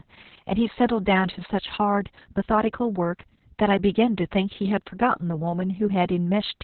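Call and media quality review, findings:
Opus voice compression, whole clip: muffled, hoarse, slightly robotic speech, nothing above 4.2 kHz. Narrowband SILK at a very low rate, roughly 6 kbps judging by the coarse excitation.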